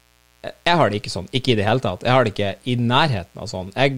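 Throughout the speech there is mains buzz. It sits far below the talking, roughly 35 dB down. Sharp spikes from a 60 Hz supply leak into the signal twice per cycle. They stack up harmonics into the kilohertz range. The result is a constant, rasping hum.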